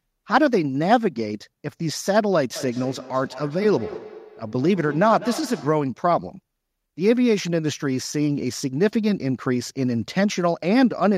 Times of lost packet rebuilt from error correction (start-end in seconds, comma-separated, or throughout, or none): none